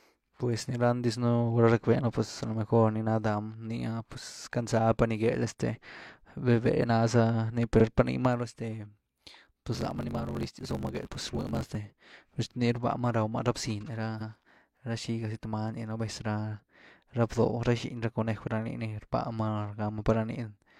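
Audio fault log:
7.76–7.81 s, repeated frames: Right after "ná za ni" and before "par niimáru", the sound stutters: a short slice of about 46 ms plays twice. One compressed frame was decoded again, adding its length to the clip.
9.73–11.77 s, block size mismatch (truncated): For about two seconds a steady 50 Hz buzz sits under the speech. The speech runs about 1.16 times too fast but keeps roughly its normal pitch. This fits one stage writing 1024-sample blocks while the next reads fewer. The tail of each block is dropped, shortening the audio, and each cut leaves a seam that repeats at the block rate to make the buzz.
14.17–14.26 s, repeated frames: A longer stutter. About 93 ms, two frames' worth, plays a second time. The run of frames was sent twice and the decoder played both copies, stretching the audio by that amount.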